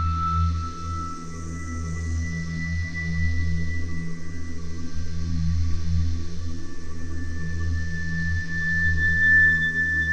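No technical faults can be heard anywhere in this recording. The sound holds steady throughout, with nothing that calls for comment.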